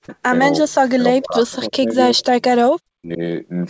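It's a speech clip from a call, and the voice keeps getting pushed down in bursts. That's speech suppressed in double talk, likely an echo canceller ducking both the voice and the loudspeaker echo while the far end talks over it. It happens at 0.0 to 0.1 s, through a long stretch from 0.61 to 1.96 s, then at 2.13 to 2.23 s and 2.96 to 3.21 s. The dips run about 40 dB deep, apart from a shallower one of about 20 dB at 2.13 s. Right at the start, from 0.08 to 0.16 s, there's also a faint echo leak, a delayed copy of the voice about 332 ms behind and roughly 30 dB down, where loudspeaker pickup likely got past the canceller. The whole thing sits below 8 kHz, which fits the G.722 call path.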